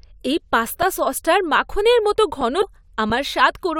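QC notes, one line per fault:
0.82 s, 2.41 s, 3.10 s: underrun with held sample. Each time the output buffer ran dry for about 5 ms and the converter froze on its last sample value, so the speech flattens into a brief held level rather than dropping to silence. When data resumed, roughly 5 ms of live audio had been skipped, so the waveform jumps from the held value to a new point.
2.61–2.64 s: damaged data in a compressed stream. Corrupted bytes in the encoded speech caused the decoder to misread the affected frames and lose sync, then hunt for the next valid frame header. The garbage decode comes out as a short chirp or blip lasting about 22 ms.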